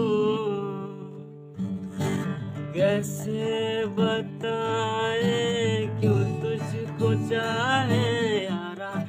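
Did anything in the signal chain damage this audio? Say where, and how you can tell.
Yes. From the start to 6.36 s there is a time-stretched section, likely introduced at a software processing stage before storage, where the audio was slowed to about 0.74 times its pace while its pitch was held. The sound there drags, then the pace jumps abruptly to normal at 6.36 s. On a spectrogram, frequencies stay put while events stretch out in time. The waveform shows short repeated segments spliced together.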